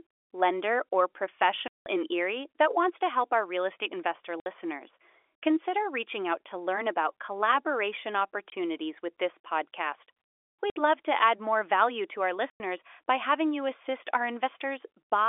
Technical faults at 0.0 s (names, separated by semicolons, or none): none